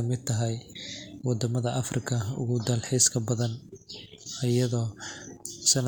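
No technical faults can be heard anywhere in the speech. Nothing in the audio calls for comment at any point.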